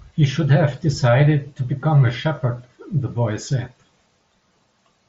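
At 2.37 s a single packet drops out, concealed Bluetooth headset packet loss. The receiver fills the short gap, about 7.5 ms, by repeating the best-matching recent waveform. It is almost inaudible. On a waveform it shows as a brief repeated cycle, and on a spectrogram as a thin smeared column.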